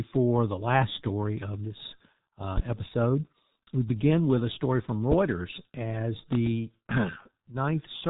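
From the start, the speech carries heavy G.723.1 codec damage. Nothing passes above 3.8 kHz, and the coarse 30 ms frame updates smear consonants and leave a hoarse, muffled quality that points to a very low bitrate near 6 kbit/s.

At 5.12 to 5.15 s, a single loud pop sits roughly 15 dB above the speech, which continues underneath. This is likely a voltage step or pulse, such as a switch or static discharge, shaped by the circuitry that follows it.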